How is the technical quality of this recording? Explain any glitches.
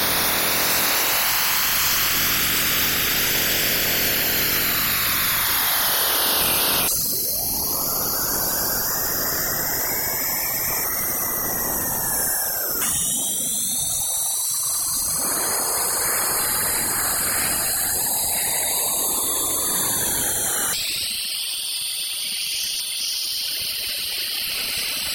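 Two glitches stand out, both the same kind of fault: chunks out of order. From 6.4 to 6.8 s, a 200 ms block of audio turns up one slot late, so it plays after the block that should follow it. From 22.2 to 23.0 s, a 200 ms block lands three slots late. Nothing is missing. The sound just runs in the wrong sequence, so each spot comes across as a brief jumbled stutter, with three hard joins where unrelated edges butt together.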